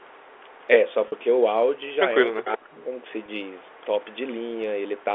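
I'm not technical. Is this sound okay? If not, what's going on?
No. Three kinds of fault can be heard in this speech clip.

The first is echo leak. A faint, delayed copy of the voice trails about 0.37 seconds behind it. This is likely because the other end uses a loudspeaker, and its echo canceller let some of the sound back into the call. It happens from 0.0 to 1.25 s, 1.78 to 1.94 s, 3.1 to 4.2 s and 4.98 to 5.04 s. At 2.37 to 2.42 s it is much louder.

The second is packet loss with pitch repetition. Small pieces of the audio went missing on the way. The receiver filled each gap by repeating the last bit of voice. That gives a brief held, buzzy sound instead of a clean break. It happens at 1.08 to 1.12 s, a gap of 40 milliseconds, and at 3.26 to 3.28 s, a shorter gap of 20 milliseconds.

The third is speech suppressed in double talk. From 2.41 to 2.97 s, the voice drops sharply, at times nearly to silence, for about half a second in total. 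This is likely because both sides were sound at once. The echo canceller could not tell the real voice from the echo, so it turned everything down. The loud echo at 2.37 s comes just before this dip.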